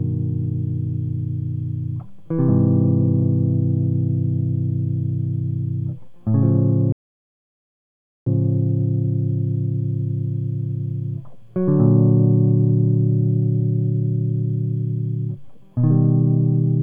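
At 6.92 s the music cuts to silence for about 1.34 s, until 8.27 s, a playback stall, likely the player starving for data before resuming.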